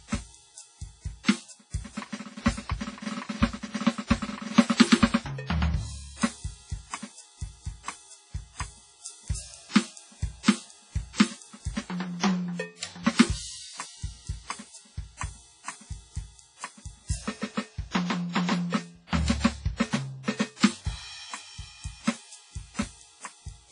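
Throughout, the music sounds washy and ringing with a hiss that breathes, likely WMA compression at a rate near 24 kbps. The spectrogram is empty above 10.3 kHz.

From 1.24 to 1.28 s, pre-echo spreads codec noise 48 ms ahead of an attack, heard as brief hiss and a softened onset, visible as a smear before the waveform's transient.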